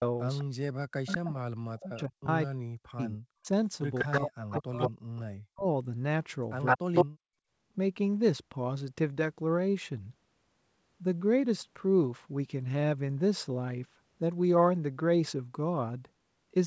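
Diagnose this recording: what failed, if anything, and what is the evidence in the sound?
A delayed copy of the speech returns at 0.38–0.44 s, 1.07–1.18 s, 3.98–5.22 s and 6.65–7.06 s. The cause is likely an echo leak in the far end's call processing, where the echo canceller let loudspeaker pickup through. The lag is 208 ms in the first two events and 160 ms in the later two. The first is faint, the middle ones sit just under the direct speech, and the last is slightly louder than it. On a spectrogram the same harmonic patterns repeat shifted right by that delay, inside the 8 kHz band the G.722 path carries.

Between 0.75 and 3.47 s, and again at 4.04–4.99 s, 5.3–5.66 s and 6.76–7.32 s, the speech is pulled down in chunks, by roughly 40 dB at the deepest. The affected time adds up to about 2 s in the first span and under a second in each later one. The likely cause is speech suppressed in double talk, a call-processing fault. 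The canceller could not tell the local talker from returning echo and attenuated both. In the waveform the envelope collapses abruptly, and the spectrogram shows blank or thinned patches across the band.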